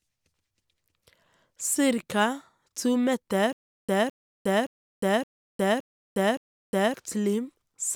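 At 3.53 s the speech breaks into a stutter with silent gaps that lasts until 6.94 s. A 211 ms burst of the same audio repeats six times, each followed by about 358 ms of dead digital silence, giving an even cycle of roughly 569 ms. The likely cause is a stalled player or stream that replays its last buffered fragment on every retry and then runs dry. The material that belonged in those gaps is missing.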